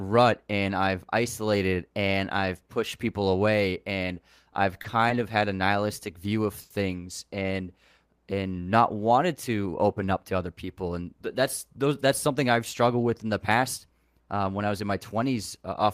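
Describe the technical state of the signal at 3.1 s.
At 3.1 s the speech signal is intact, with no audible dropout, distortion, clipping or other technical fault.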